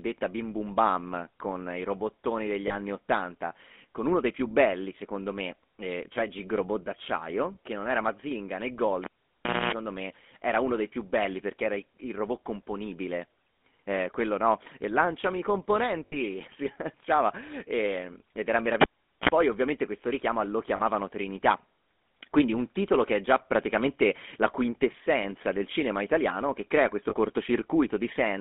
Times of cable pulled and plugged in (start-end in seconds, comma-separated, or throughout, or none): 9.04-9.73, 18.81-19.29